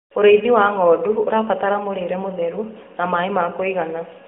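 Nothing in this speech clip stands out as a technical fault, so there's nothing to flag here.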